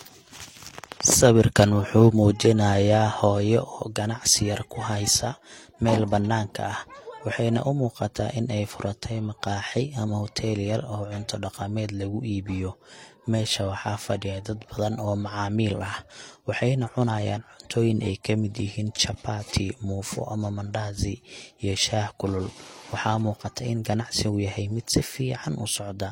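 Throughout, the speech carries two overlapping layers of codec artefacts and nothing above 16.2 kHz, likely from transcoding between lossy codecs, fitting an MP3 stage followed by HE-AAC.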